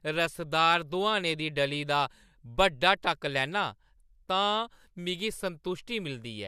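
Nothing faulty can be heard anywhere in this speech recording.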